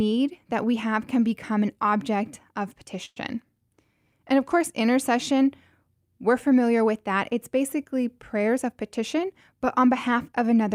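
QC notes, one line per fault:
3.05 to 3.18 s, call audio freeze: just after "become an object of" the sound stalls for about 0.13 s. The last sound is carried on as a short fading buzz or hiss for roughly 108 ms, then drops to about 20 ms of silence before the speech picks up exactly where it stopped, with nothing lost. This is likely a hold-up in packet delivery that left the jitter buffer empty, so the receiver had to fill the wait and the rest of the call now runs 108 ms later.
8.48 to 10.59 s, jitter buffer speed-up: across these two seconds the speech runs slightly quick and sounds a little hurried, about 5 percent faster, with its pitch unchanged. Having banked more audio than it aims for, the receiver caught up by trimming many tiny pieces, each one or a few pitch periods long, in quick succession. Around a tenth of a second was removed in total, so timing tightens while the pitch holds steady.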